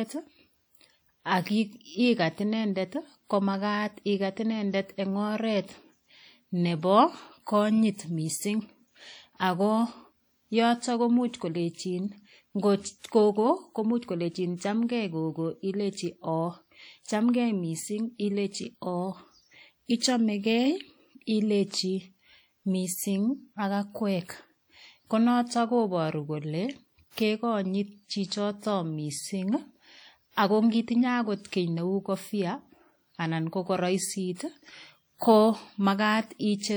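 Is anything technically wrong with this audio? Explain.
Yes. Throughout the speech there is a ringing, washy hiss that swells and fades with the signal, likely WMA compression at a low bitrate near 48 kbps. On a spectrogram it appears as patchy, smeared bands.

Pre-echo at 19.99 s and 34.35 s: the codec spreads its noise across whole blocks, so hiss arrives 27 ms and 40 ms before attacks. On the waveform, fuzz appears ahead of each onset.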